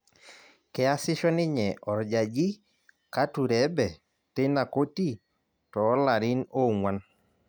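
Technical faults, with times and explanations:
Nothing technical gets in the way here; it's just the speech as recorded, with no faults to point to.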